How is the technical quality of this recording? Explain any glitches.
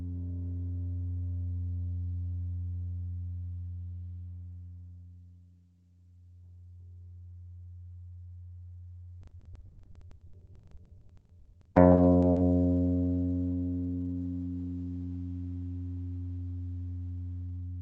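From 9.21 to 12.39 s the audio breaks up with repeated packet loss (robotic sound). About 40 times packets went missing or arrived too late, the longest gap 80 ms, and each hole was patched by stretching the last received sound forward. Roughly 37 percent of that stretch is concealment rather than real audio, so it turns choppy, with pieces dropped. The call path itself narrows the sound, with high frequencies cut off above about 8 kHz.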